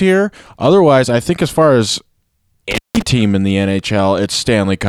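At 2.71 s the speech suffers an intermittent contact fault lasting until about 3.02 s, just before "team in the". A loose connection in the signal path opens, so the audio drops out for about 0.17 s. The break is framed by crackle as the contact scrapes open and then reseats, and during the gap only a faint hiss remains where the signal should be.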